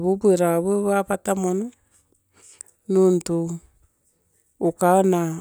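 No technical faults can be heard anywhere in this recording, and the signal runs from its first moment to its last without any audible disturbance.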